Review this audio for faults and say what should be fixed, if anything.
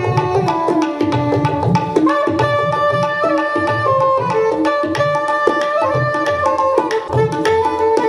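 From 7.07 to 7.10 s there is a brief 30 ms disruption where the audio jumps forward and the continuity breaks. This is likely a broken MP3 bit reservoir. A section of the stream went missing, so the next frame reached back into the reservoir for data that was no longer there and decoded bytes belonging to a different frame. The 30 ms duration is consistent with roughly one 26 ms MP3 frame. Prevent it by cutting or splicing MP3 streams only at points that respect the bit reservoir, or by decoding to PCM before editing.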